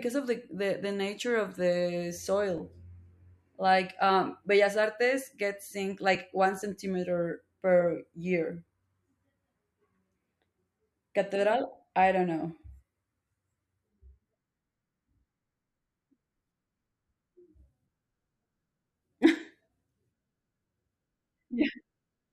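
From 2.58 s to 20.43 s the speech carries a regular click, about seven in all, recurring every 3.58 s. This pattern points to clock drift buffer slips. The likely cause is two devices running on independent clocks that disagree by roughly 700 ppm, so the buffer between them gradually drifts until a block of around 150 samples is dropped or repeated. Each slip is a brief discontinuity, heard as a sharp tick that keeps strict time across the clip.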